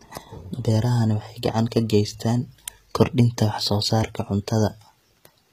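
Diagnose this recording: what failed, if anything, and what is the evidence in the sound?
The codec stage is where this went wrong. All the way through, the sibilants sound gritty and metallic, and nothing reaches above about 14.9 kHz. That's likely HE-AAC compression at a low bitrate, around 20 kbps: the treble gets rebuilt from copied lower bands, so its harmonics don't line up.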